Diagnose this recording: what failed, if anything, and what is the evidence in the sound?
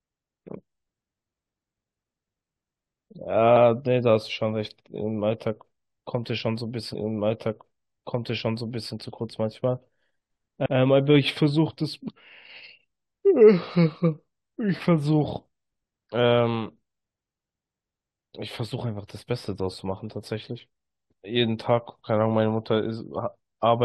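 Overlapping chunks in the buffering stage: the audio was handled in blocks of about 5 s, and one block began before the previous had ended, so 100 ms replays. The speech stutters from 10.66 to 10.76 s, briefly doubling the sound at that join.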